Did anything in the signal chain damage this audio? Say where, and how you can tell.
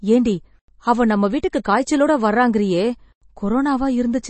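Yes. Throughout the clip the speech sounds watery and swirly, with a hard ceiling on the treble: nothing reaches above about 8.3 kHz, and the codec damage is plainly audible. That fixed cut-off and the warbling texture point to the codec stage, most likely MP3 compression at a low bitrate consistent with around 32 kbps. Short of bits, the encoder discards everything above the cut-off and drops weaker frequency lines, which flicker in and out from frame to frame.

At 1.64 s, just before "காய்ச்சலோட வர்றாங்கறீயே", there is a brief hiss of about 10 ms ahead of a sharp onset, and the attack sounds softened. This is pre-echo, again from the codec stage. The transform spreads quantisation noise evenly across its whole block. Because the sudden rise falls late in that block, noise sized for the louder part spills into the quiet moment just before it.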